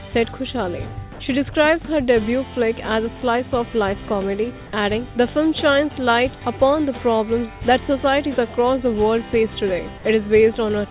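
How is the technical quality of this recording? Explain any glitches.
One short glitch stands out in a recording carried over a narrowband call path that cuts off everything above 4 kHz. From 1.13 to 1.19 s, sound dropped by the voice detector is replaced by 60 ms of flat comfort noise, likely because the detector mistook the sound for background. It shows as a low, even patch in the waveform and a featureless band on the spectrogram.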